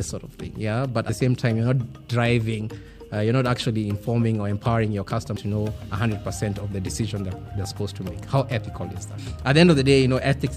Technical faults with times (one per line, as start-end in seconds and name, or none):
1.09 compressed frames skipped
5.37 compressed frames skipped